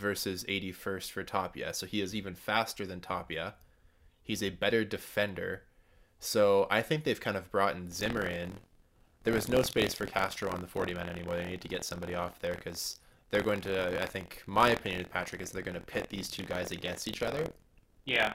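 Buffer tearing starts at 7.9 s, just after "kind of brought in", and lasts to the end of the clip. The program filling the playback ring buffer and the hardware draining it have drifted until they cross inside each period, so a small slice of every buffer replays audio from about a twentieth of a second earlier, hard-spliced on both sides. The result is a robotic rattle at 43.1 Hz riding on the speech, which fits a 1024-sample buffer.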